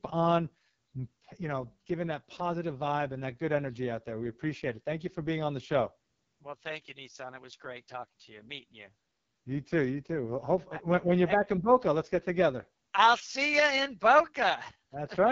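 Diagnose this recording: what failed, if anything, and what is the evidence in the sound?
AMR wideband (HD Voice) codec, throughout: rough, raspy speech with nothing above 7.5 kHz, pointing to the lowest 6.6 kbit/s mode. This is codec-stage damage from the coarse excitation model and noise-filled upper band.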